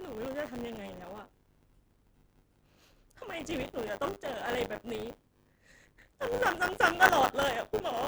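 Speech with buffer tearing throughout: a steady 100 Hz robotic buzz, present only while sound plays, where roughly a sixth of each 10 ms period repeats audio from about 30 ms earlier, showing as hard waveform seams and regular vertical striations on a spectrogram.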